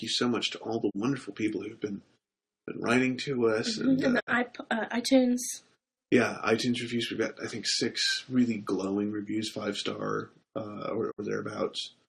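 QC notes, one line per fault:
0.89–0.96 s, 4.19–4.29 s and 11.10–11.20 s, digital broadcast dropout: the sound fades out over about 20 ms and goes silent while the receiver mutes on bad frames. The gaps are 32 ms, then 64 ms twice, which fits one and two lost frames. That audio is gone.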